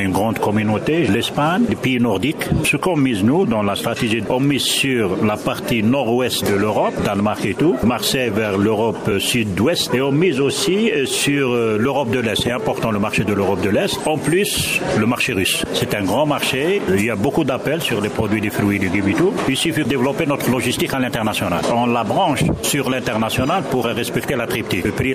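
Brief smeared blips, each a slight jump forward rather than a sharp click, occur at 6.41 s, 9.10 s and 24.85 s. These are compressed frames skipped. Whole blocks of coded audio never reach the output, so the sound leaps ahead by roughly 50 ms, 20 ms and 70 ms. With a frame length of 23.2 ms, that fits about two, one and three lost frames. Overlap between neighbouring frames softens each join into a short blur.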